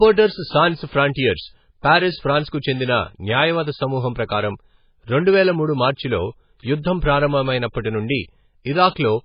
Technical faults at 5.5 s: low-bitrate audio saved at a high bitrate

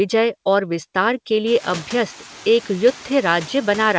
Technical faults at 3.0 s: noise suppressor artifacts

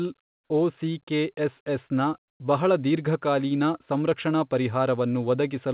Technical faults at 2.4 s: comfort noise in place of the background

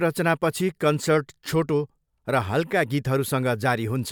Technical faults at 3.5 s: none

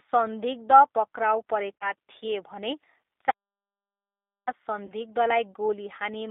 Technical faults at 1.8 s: G.729 codec; VoIP packet loss concealed by the speech codec

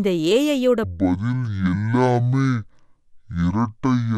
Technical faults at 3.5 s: section at the wrong speed

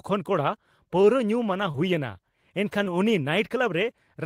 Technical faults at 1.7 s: short concealed packet loss

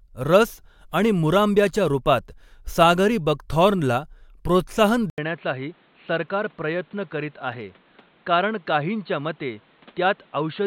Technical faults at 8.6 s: input switched to a poorer device

